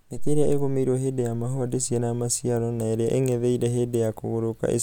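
No technical faults can be heard anywhere in the speech; the signal holds steady without any disturbance.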